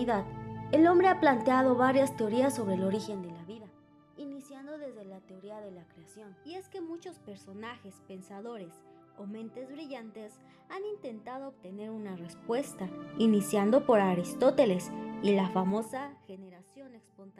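Zipper noise appears at 2.88 to 3.72 s, 11.61 to 13.10 s and 15.51 to 16.53 s. Each time, the level is moved in audible steps of 2 dB, 1 dB and 2 dB, roughly ten steps a second, with no smoothing between them. The moves are a fall of about 20 dB, a rise of about 20 dB and a fall of about 25 dB. Every jump leaves a small click, heard as a ticking that rides on the sound.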